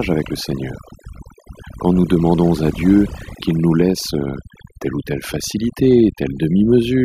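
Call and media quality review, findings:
Overdone noise removal, throughout. Noise suppressor set too aggressively: bands near its noise estimate pulled far down or gated off, taking low-level speech detail with them. Background collapses to near-silence with twinkling artefacts.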